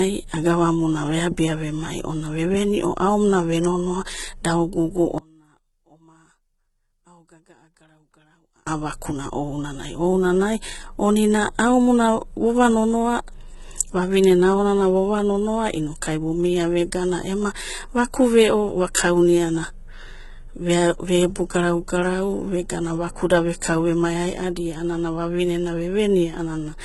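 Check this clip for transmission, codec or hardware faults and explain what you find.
Two faults are present. Throughout: heavy HE-AAC compression damage. Nothing reaches above 11.8 kHz, and the rebuilt treble sounds gritty and mismatched, likely from a low bitrate near 16 kbps.

From 5.18 to 8.67 s, after "ve nonoa da ogugu", the sound drops about 32 dB until "vakuna ounanai ounanai omina". The likely cause is one channel inverted, cancelling the shared content in mono.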